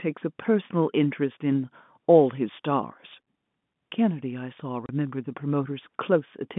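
At 4.86 s the speech drops out for about 30 ms, ending at 4.89 s. This is packet loss filled with silence: a stretch of the stream never arrived, and the receiver inserted digital silence instead of concealing the gap. The hole's length fits a single lost 30 ms packet. Because the signal stops and resumes abruptly, the hole has hard edges. The surrounding G.711 telephone coding keeps its narrow 150 Hz to 3.5 kHz line band.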